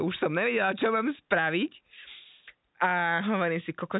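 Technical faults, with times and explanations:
No technical faults are audible.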